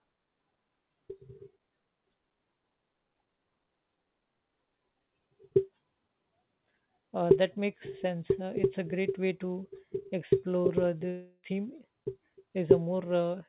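From 11.1 to 11.51 s the speech gives way to a fading buzz. About 0.32 s of audio is lost. This is likely a long network dropout.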